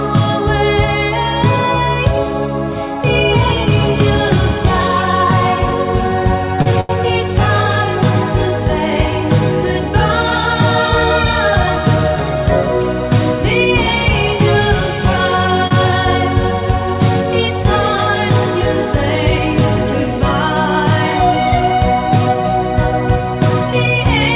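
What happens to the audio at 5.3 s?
At 5.3 s the audio is intact, carried cleanly through a narrowband call path that keeps nothing above 4 kHz, which fits a G.711 mu-law link at 64 kbps.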